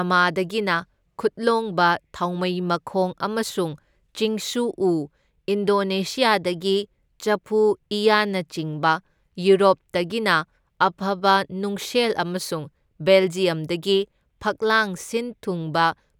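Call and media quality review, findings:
Sample clock jitter throughout: faint hiss riding loud, bright speech, gone in pauses. Converter clock wobbling under a microsecond rms, error about 45 dB down; spectrogram shows level-tracking broadband noise floor.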